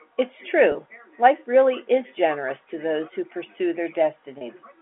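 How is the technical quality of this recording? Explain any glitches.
Two brief dropouts mar the speech, each bridged by concealment, over a telephone-band G.711 path that keeps the sound between roughly 250 Hz and 3.4 kHz.

At 0.72 s and again at 4.38 s, about 30 ms of audio goes missing, which fits a single lost packet each time. This is packet loss with pitch repetition: the receiver fills the hole by looping the last pitch period it had, so each gap sounds like a tiny held, buzzy smear rather than silence. On a waveform the spot shows as identical repeated cycles; on a spectrogram, as flat, unchanging harmonic stripes for those 30 ms.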